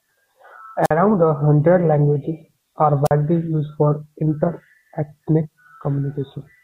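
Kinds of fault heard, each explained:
Wireless microphone squelch dropout: the RF link from an analogue FM body-pack or handheld weakens far enough that the receiver's squelch gate closes, cutting the audio output entirely until the carrier recovers. Here it happens twice, at 0.83 to 0.91 s and at 3.05 to 3.11 s. Each event brings a short burst of hiss as the signal fades, then a near-silent gap in the speech of about 48 ms and 44 ms respectively before the speech resumes.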